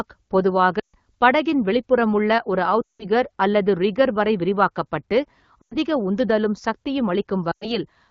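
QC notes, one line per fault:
0.79–0.95 s, 2.81–3.05 s, 5.61–5.76 s, 7.52–7.78 s: lost AMR speech frames. Radio errors corrupted runs of frames, so the AMR-WB decoder, running cleanly at 12.65 kbit/s, concealed each gap by repeating the last good pitch and vocal tract settings at falling gain. Each gap lasts 100 to 180 ms, consistent with 20 ms frames. The sound drops to near silence within two frames before "படகின் வெளிப்புறமுள்ள ஒரு", near 3 s, between "அல்லது ரிக்கர் வரை விரிவாக்கப்பட்டு" and "உந்துதலும் சக்தியும்", and after "உந்துதலும் சக்தியும்". It returns briefly weak or rough each time.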